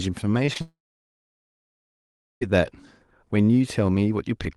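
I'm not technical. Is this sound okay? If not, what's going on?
No, it isn't. Early on there's some short concealed packet loss, at about 0.45, 0.53 and 0.57 s. Each time roughly 20 ms of the call didn't arrive, so the receiver papered over it by stretching the previous sound, which you hear as a quick smear or wobble.

Then, from 0.61 s to 2.43 s, there's a long network dropout, likely from the connection stalling. The last sound trails off briefly, then there's about 1.7 s of near silence, and the audio picks up again with that stretch simply gone.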